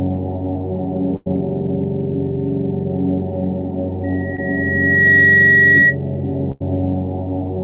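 First up, at 1.16 to 1.28 s there's a burst of packet loss. About 100 ms never arrived in time, so the receiver stretched the last bit of sound and faded it down. You hear a held, dimming smear, then the audio jumps ahead with that stretch gone.

From 4.04 s a loudspeaker feedback squeal takes over. The mic is catching its own speaker output, and at 1.9 kHz the loop gain tipped past one, so that tone feeds itself. It swells over roughly a second to something like 10 dB above the actual sound, and holds until about 5.96 s.

Buried inside that howl, at 4.36 to 4.40 s, is a short concealed packet loss. Just 20 ms went missing, and the receiver patched it by continuing the last sound and blending back in. It comes through as a tiny wobble or smear.

Then at 6.52 to 6.62 s there's a second burst of packet loss, around 80 ms this time. You get the same held-then-fading fill and the same skip forward.

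All of this sits on top of a call path with nothing above 4 kHz, which fits G.711 mu-law at 64 kbps.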